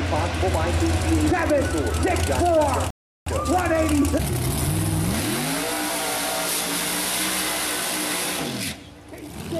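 At 2.90 s the player exhausts its store of downloaded audio and has to wait for more data to arrive over the network, producing a rebuffering stall. Playback halts until 3.27 s, leaving a gap of silence about 0.36 s long, and then picks up at precisely the point where it stopped. No sound is skipped or repeated; the stall simply inserts roughly 360 ms of dead air, stretching the timeline and breaking the flow.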